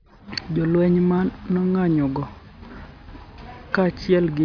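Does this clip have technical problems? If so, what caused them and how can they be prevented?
No, nothing in this recording points to a technical fault, so there is no cause to trace and nothing to prevent.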